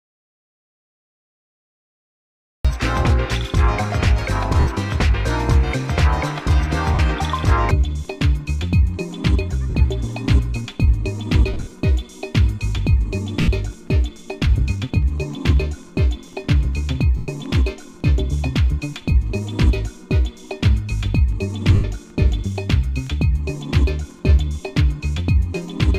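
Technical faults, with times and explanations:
0.00–2.65 s, audio dropout to silence: the clip opens already inside a gap of complete silence, with no room tone or noise floor, and the sound only arrives at 2.65 s, coming in mid-flow. A silent gap like this is what a recorder writes when its input disappears, most likely from a disconnected device, a broken link or a mute left engaged. Whatever preceded 2.65 s is gone.
4.60 s, 6.94 s, 9.70 s, 11.53–11.73 s, 13.41 s, 17.17 s and 21.74 s, lost LE Audio frames: seven brief patches where the decoder had nothing to play and filled in by repeating the last spectrum with randomised phase. Tonal content turns into a short noisy smear rather than a hard click. The gaps last 70, 50, 50, 140, 70, 110 and 100 ms respectively; the 11.53 s event is broken up across about 200 ms in runs of a few tens of milliseconds, which fits loss in 10 ms frames. Light perceptual coding also sits on the signal.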